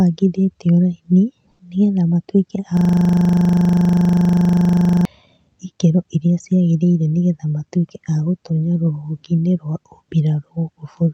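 A speech recording carried over a call codec whose high frequencies stop at about 8 kHz. From 1.51 to 1.59 s the background becomes flat, featureless comfort noise about 5 dB quieter, likely from discontinuous transmission; unlike a dropout, it never goes silent. From 2.77 to 5.05 s a system hang loop repeats one 40 ms slice at 25 Hz, identical each pass, unlike loss concealment's fading, varied repeats.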